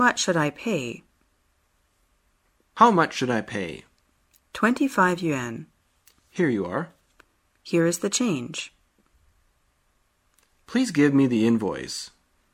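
No technical faults can be heard anywhere here.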